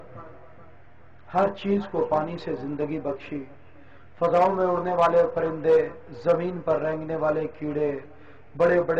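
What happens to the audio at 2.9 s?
Nothing goes wrong at 2.9 s; the audio plays through that moment intact, with no dropout, click or distortion.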